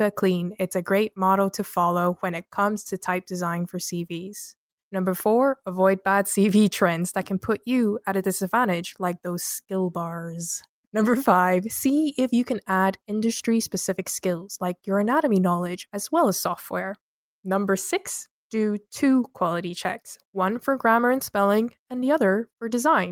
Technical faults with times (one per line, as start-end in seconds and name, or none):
none